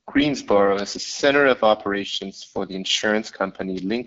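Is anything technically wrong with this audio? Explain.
Yes. Throughout, the AMR wideband (HD Voice) codec audibly roughens the speech. Its rough, raspy texture fits a low rate near 8.85 kbit/s. Unlike narrowband phone coding, content reaches about 7.8 kHz.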